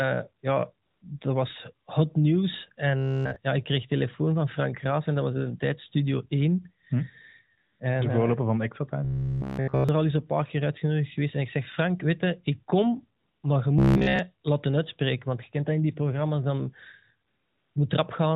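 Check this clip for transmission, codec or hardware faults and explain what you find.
Two faults recur in this speech recording: AMR comfort noise in four pauses and a robotic buzz in three stretches. All of it travels through the narrowband AMR mobile codec, whose 4 kHz ceiling and light coding roughness can be heard throughout and fit a rate of about 12.2 kbps.

AMR comfort noise occurs at 0.86–1.02 s, 7.58–7.80 s, 13.20–13.44 s and 17.28–17.76 s, the last one right after "in die programma's dan". The sending phone decided nothing was being said and stopped transmitting speech frames for 160, 220, 240 and 480 ms. The receiver filled each gap with synthetic noise built from a rough level-and-spectrum description. The real background drops out, and a flat, smooth hiss switches in and then back out.

Robotic sound from repeated short buffers occurs at 2.97–3.36 s, 9.05–9.89 s (just before "er al eens een") and 13.79–14.19 s (just before "laten uitspreken"). 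Fresh audio stopped arriving in time, so playback looped the last fragment over essentially the whole stretch and skipped the real signal. That loop imposes a steady 66.8 Hz buzz, likely from a repeated buffer of about 15 ms. The result is a hard, metallic drone that only loosely tracks the speech.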